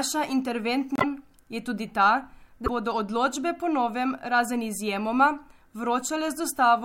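At 0.96 to 1.04 s the speech jumps ahead and is briefly garbled for about 84 ms, then again at 2.65 to 2.69 s for about 40 ms. The likely cause is a broken MP3 bit reservoir: frames were lost, so the next frames reached back for borrowed bits and decoded bytes belonging to other frames. The first stretch spans roughly three of the 26.1 ms frames, and the second is under two.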